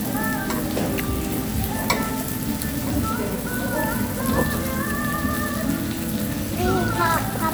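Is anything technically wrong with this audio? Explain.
No, nothing in this audio points to a technical problem in the recording or playback chain.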